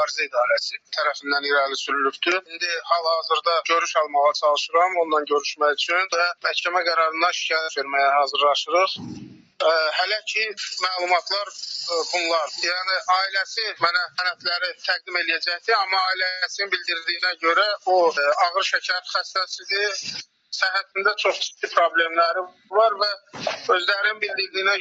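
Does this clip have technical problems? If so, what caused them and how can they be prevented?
Yes. A noise suppressor applied to music or sounds stays active throughout, treating sustained material as noise, so the level pumps by around 5 dB and the sound thins. Disable speech noise suppression, or use a music mode, when sending non-speech audio.

The same sound cut by the noise suppressor produces sharper dips at 0.77–0.93 s, 9.31–9.6 s and 20.24–20.53 s (about 18 dB), 22.51–22.71 s (about 14 dB) and 23.19–23.34 s (about 13 dB). Turning the suppressor off for this material prevents these dips.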